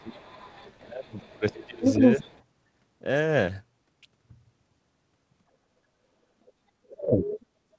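From 0.0 to 2.43 s, a second voice leaks through at roughly the same level as the speech. This is the other side's voice leaking through, likely because the echo canceller left loudspeaker echo in the microphone. Within that stretch, the speech dips by roughly 20 dB from 0.0 to 0.29 s and again from 0.81 to 2.3 s. That is speech suppressed in double talk. The canceller likely could not separate the talker from the echo, so it turned both down. A faint leak of the other voice follows at 6.46 to 6.53 s, about 35 dB down. From 6.8 to 7.59 s, the speech drops by roughly 40 dB. At 7.25 to 7.38 s, inside that dip, the other voice comes through about 10 dB below the speech. Throughout, nothing is heard above 8 kHz, which fits the G.722 call codec.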